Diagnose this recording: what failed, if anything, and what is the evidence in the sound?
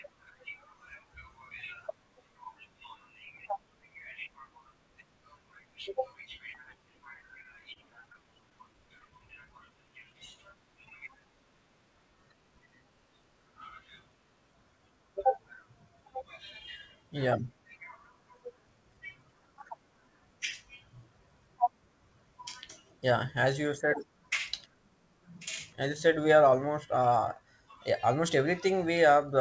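Scattered short gaps, 7.43 to 9.91 s, at the network and jitter-buffer stage. Roughly fifteen packets went missing or arrived too late, dotted through this speech. The receiver bridged each hole by extending the last sound, none longer than about 20 ms and together around 150 ms, close to 7 percent of the stretch. That is why brief ticks, smears and hiccups pass by while the speech stays largely clear.

Jitter buffer slow-down, 8.35 to 10.14 s, in the receiver's playout buffer. Its reserve ran low, so it stretched the audio by repeating single pitch periods and fragments of pauses over and over, adding 85 ms. Playback drops to 96 percent speed with the pitch unchanged. Sounds come out drawn out, and this overlaps the tail of the gap stretch. The G.722 call path carries nothing above 8 kHz.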